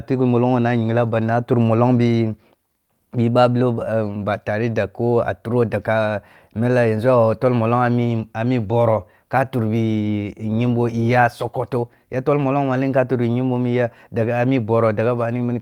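Nothing in this speech recording stood out as a technical problem on listening.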